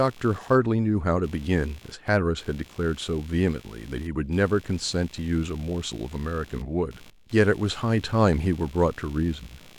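Throughout, computer activity noise, a buzzy chirping around 70 pulses per second and roughly 25 dB below the speech, rises and falls with computer load, unlike steady mains hum.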